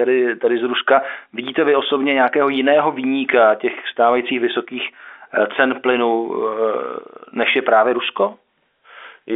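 No technical faults are audible.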